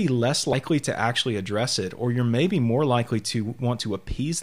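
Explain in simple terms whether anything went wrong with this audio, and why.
At 0.53 s there is a case of compressed frames skipped: about two frames of the encoded speech never got played, so the audio jumps ahead by roughly 70 ms. Unlike a dropout, there's no gap of silence.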